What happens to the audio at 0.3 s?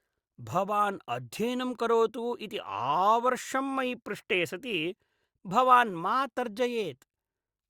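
Nothing goes wrong at 0.3 s; the speech there plays through intact, with no dropout, click or distortion at that moment.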